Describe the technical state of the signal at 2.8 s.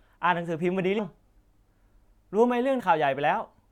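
Right around 2.79 to 2.81 s you get compressed frames skipped: a run of frames never gets decoded, so the speech jumps ahead by nearly half a second, which points to around fifteen 23.2 ms frames. Because the surrounding frames overlap, the join comes out as a short smeared blip, not a hard click.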